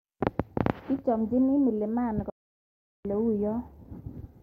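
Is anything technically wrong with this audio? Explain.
Yes. From 2.30 s to 3.05 s the speech cuts out completely for about 750 ms, with abrupt edges or a fade of a few milliseconds on both sides. This is likely a Bluetooth dropout: audio packets failed to arrive at the headphones in time, were discarded, and the output fell silent until valid data resumed, consistent with a run of about 40 lost packets. When the speech returns it has moved on, as though it kept playing during the gap.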